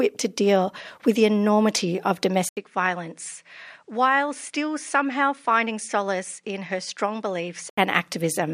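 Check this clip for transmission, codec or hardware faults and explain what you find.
One fault is present in this speech clip. From 2.49 to 7.78 s, just after "with the enormity of", an 80 ms gap is followed by content cut off above 10.5 kHz, a faint new noise floor and slightly lower level. This is likely an input switched to a poorer device. On a spectrogram the top band goes empty, and the waveform shrinks a little.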